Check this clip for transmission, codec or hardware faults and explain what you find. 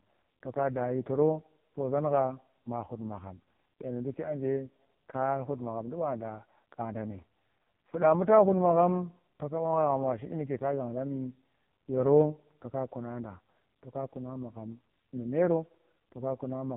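One fault runs through the whole speech recording: AMR narrowband mobile codec damage, and it is heavy. Nothing reaches above about 3.8 kHz, so sibilants lose their hiss and the voice sounds boxed-in. The codec rebuilds each 20 ms frame from a vocal-tract model driven by sparse pulses, and here those pulses are so few that the voice turns buzzy and synthetic, which fits the lowest AMR-NB mode, around 4.75 kbps. Simple low-pass filtering would dull the sound but leave it natural, and it is that artificial buzz that marks this as a codec.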